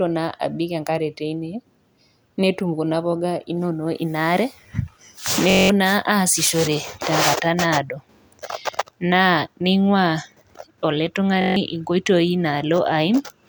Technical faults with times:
5.50-5.70 system hang loop
11.41-11.56 system hang loop

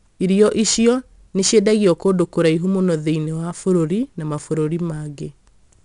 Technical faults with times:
0.00-5.84 4-bit ADPCM compression

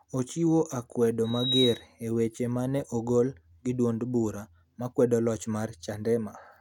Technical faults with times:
1.24-1.87 loudspeaker feedback squeal

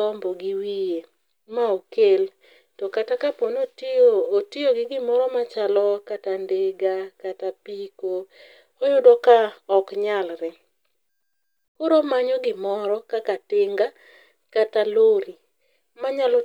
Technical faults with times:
none

